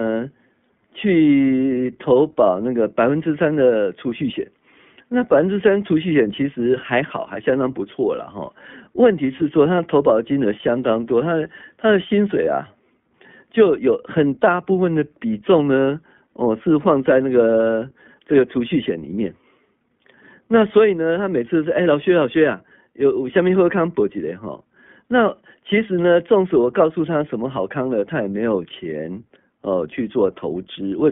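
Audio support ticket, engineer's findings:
iLBC codec, throughout. Band-limited to roughly 150 Hz to 3.5 kHz; speech clear but audibly rough and synthetic. Each 20 ms frame's excitation coded independently, which fits iLBC's 15.2 kbps mode. Nothing above the telephone band survives.

Lost iLBC frames, 9.38 to 9.43 s. Brief held, slightly buzzy vowel-like sound, consistent with a single 20 ms frame dropped. Decoder concealment repeats last pitch cycle blended with noise; speech recovers almost immediately since frames stand alone.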